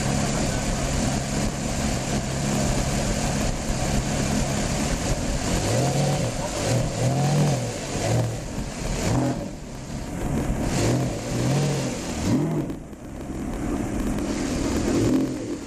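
Throughout, a block size mismatch with zero padding adds a 43.1 Hz buzz, consistent with 1024-sample reads, and slows the audio to 0.938 times normal speed while keeping the timbre.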